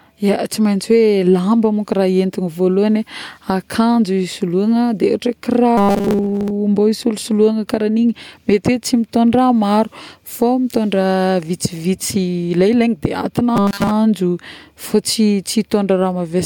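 From 5.77 to 6.50 s, and again from 13.56 to 13.91 s, the speech goes robotic from repeated short buffers: a stiff, metallic 200 Hz buzz. It's likely a starved stream looping roughly 5 ms chunks, with most of the real audio skipped.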